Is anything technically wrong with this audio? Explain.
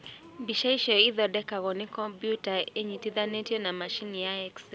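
No, nothing is technically wrong with this speech audio.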